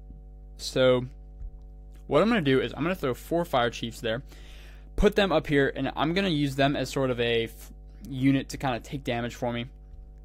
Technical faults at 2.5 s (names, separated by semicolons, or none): mains hum